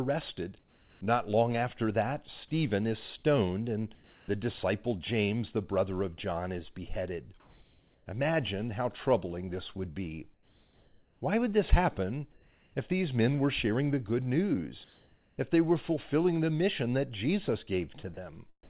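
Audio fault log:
0.59–1.01 s, 3.95–4.28 s (between "is stoned and" and "the disciple"), 7.40–8.06 s (after "is beheaded"), 10.34–11.21 s (after "troubling this would be"), 12.32–12.74 s, 14.84–15.38 s: comfort noise in place of the background. In each pause the real background gives way to steady, featureless hiss, from about 1 dB quieter to about 4 dB louder. On a spectrogram this shows as a smooth, even band under the call's 4 kHz ceiling. The cause is likely discontinuous transmission.
18.14–18.17 s: sound dropped by the voice detector. About 30 ms of speech is replaced by steady noise, likely because the detector took quiet speech for background.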